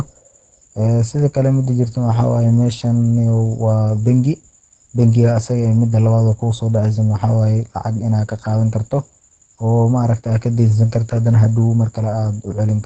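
A speech recording, muffled and hoarse from start to finish, with a hard spectral ceiling near 9 kHz, likely Opus compression in its SILK speech mode at a low rate, around 16 kbps. A spectrogram would show a flat, empty band above 9 kHz.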